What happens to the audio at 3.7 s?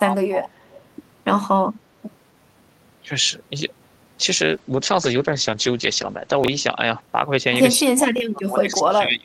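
Nothing goes wrong at 3.7 s: the speech runs through that moment intact, with no dropout, click or other fault to be heard.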